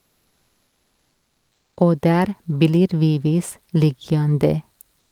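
A speech clip with comfort noise in place of the background from 0 to 1.75 s and again from 4.99 s to the end. Unlike a noise gate's silence, a steady, featureless hiss replaces the real room sound, about 4 dB and then about 1 dB quieter, likely from Opus discontinuous transmission.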